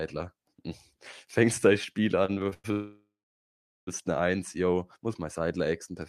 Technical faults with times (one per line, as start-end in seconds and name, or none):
2.25-2.66 repeated stalls (stutter)
2.72-3.89 call audio freeze